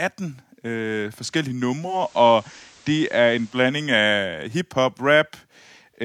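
At 1.74 s the receiver loses its digital signal and blends to the station's FM analogue broadcast, returning to digital at 3.80 s. This is digital radio blending to analogue. Each cross-fade takes about 0.39 s. Hiss rises to roughly 30 dB below the signal, and the level shifts by about 1 dB.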